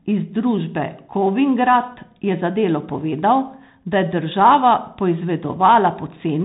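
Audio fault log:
Throughout: Bluetooth CVSD headset codec. The speech stops at about 3.8 kHz, and the one-bit delta coding, which fits a 64 kbps CVSD link, cannot track fast loud rises, so s sounds turn scratchy and a granular hiss sits underneath.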